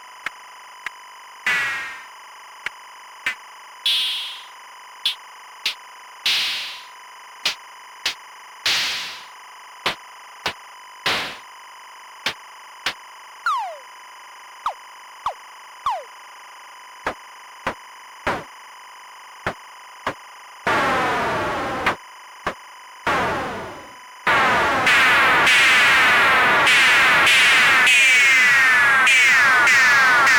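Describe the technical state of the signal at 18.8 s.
At 18.8 s you're hearing timecode bleed, and it isn't just there: it runs the whole length of the clip. Linear timecode from a nearby track or cable is leaking in, a square wave flipping between roughly 1 kHz and 2 kHz as it encodes frames, at a rate that fits 25 fps code. It sits around 25 dB under the sound, so you get a steady, chirpy warble buzzing away in the background.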